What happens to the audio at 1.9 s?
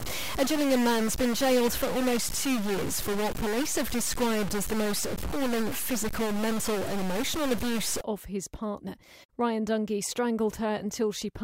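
Harsh, buzzy distortion runs through the speech from 0.0 to 8.01 s, pauses included, most likely a stuck bit offsetting values by roughly -30 dBFS.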